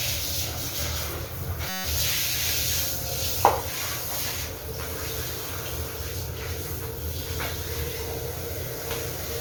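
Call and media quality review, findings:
System hang loop, 1.69 to 1.85 s. Host or audio driver stalled while the output hardware kept replaying its last ring-buffer segment. A 5.33 ms fragment repeats 29 times at 188 Hz, fitting a 256-sample buffer at 48 kHz. Heard as a brief steady buzz replacing the sound. Essentially nothing is dropped afterwards.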